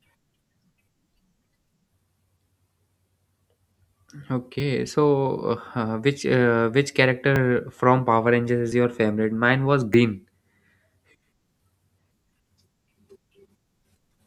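Four quick skips show up in this speech, all of the same kind. At 4.6 s the sound jumps forward a touch, right before "so uh which uh". It happens again at 7.36 s just after "uh which uh which", a slightly bigger jump, then at 8.72 s before "your favorite", and at 9.94 s, where the longest chunk goes missing. No gaps, just jumps where audio got butted together, likely a dropped buffer (overrun).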